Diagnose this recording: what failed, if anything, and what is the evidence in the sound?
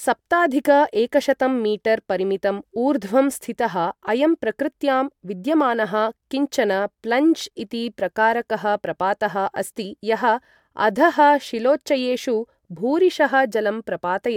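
Nothing in this speech recording points to a failure at any stage of the chain. No event in the sound calls for a diagnosis.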